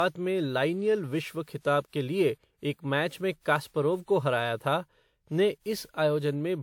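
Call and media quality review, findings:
Generation loss, throughout the speech. Swirly, hollow, smeared texture beyond what a single 128 kbit/s encode would give; consonant attacks blurred. Likely cause: repeated WMA re-encoding at 128 kbit/s, around seven passes, each requantising on a shifted frame grid so noise and spectral holes compound. Spectrogram: patchy, flickering holes across the upper bands, smeared onsets, nothing above 20.1 kHz. Waveform: softened transients.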